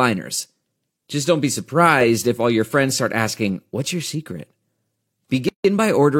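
A gap at a join of encoded pieces opens from 5.49 to 5.64 s, a gap of about 157 ms cutting into continuous speech. Separately encoded pieces, roughly 6 s long, were joined with each run's start-up silence and padded final frame left in place, so the sound stops on smeared edges and resumes where it left off.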